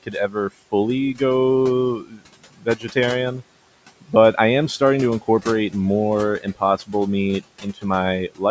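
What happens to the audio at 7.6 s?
From 7.61 to 7.84 s, the noise suppressor cuts speech. It mistakes part of the sound for noise and lowers it by up to about 13 dB. Roughly a tenth of a second sounds swallowed and faint.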